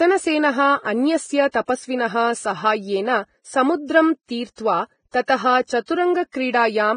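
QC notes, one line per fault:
Throughout: Vorbis compression, heavy. The speech is hissy and grainy, with nothing above about 9.7 kHz. The band edge is lowered and the treble is quantised so coarsely that fine detail is replaced by noise of similar energy. Voiced tones sound roughened, and consonant onsets are blurred. The damage level fits a low bitrate near 21 kbps and is likely from Vorbis encoding.
1.51–6.34 s: pre-echo, six events. Onsets at 1.51 s (just before "तपस्विनः साहाय्येन समुद्रं"), 4.56 s (just after "तपस्विनः साहाय्येन समुद्रं"), 5.11 s, 5.25 s, 5.86 s and 6.32 s. Each has a brief hiss of 23 to 32 ms ahead of a sharp attack. The transform block spreads its quantisation noise evenly, so noise scaled to the loud onset leaks into the quiet gap before it. The attacks sound softened and smeared.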